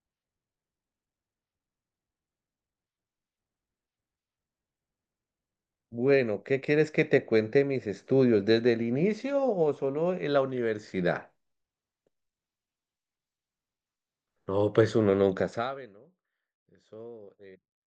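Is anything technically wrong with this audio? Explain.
No, nothing technical stood out on listening to this speech recording.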